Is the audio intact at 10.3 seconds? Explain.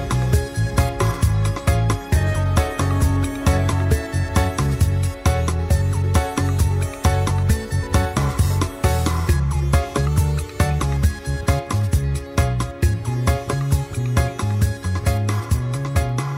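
No. From 10.07 s to 10.82 s the audio runs about 5.6% fast, raising pitch by roughly 95 cents, close to a semitone, before snapping back to normal rate. This is a drift correction step, likely from clock-matching software that changed the playback rate in a single jump to refill or drain its buffer. Because speed and pitch move together, the passage sounds abruptly detuned and slightly hurried for about three-quarters of a second.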